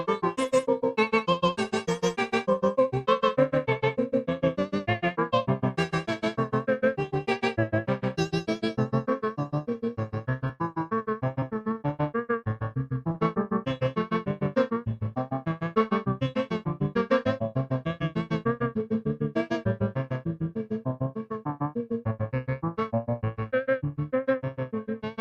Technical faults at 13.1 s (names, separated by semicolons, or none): short concealed packet loss